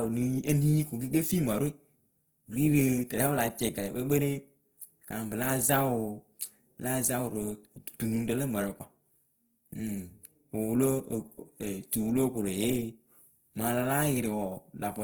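Throughout the speech, the sound is grainy and rough, with a noisy fizz over its tones. This is likely Opus compression in its music mode. Starved of bits, it fills bands with noise or folded copies. That fits about 16 kbps. Content still reaches 20.2 kHz.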